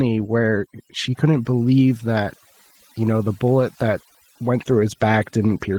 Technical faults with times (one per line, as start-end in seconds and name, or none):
0.00-5.78 overdone noise removal
0.00-5.78 Opus voice compression